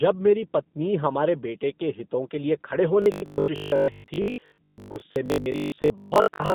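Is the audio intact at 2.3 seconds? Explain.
No. G.729 codec damage covers the whole clip, 2.3 s included. Speech rebuilt from a vocal-tract model and sparse pulses sounds rough and synthetic, with nothing above 3.7 kHz, which fits 8 kbit/s.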